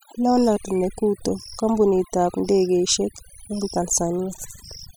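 A short speech recording carries overdone noise removal from start to finish: the gaps between phrases fall to near silence dotted with twinkling, chirpy specks. A noise reduction stage was pushed far too hard on a noisy source, so individual frequency bands sitting close to its noise estimate are cut deeply or switched off, taking the quieter parts of the speech along with the noise.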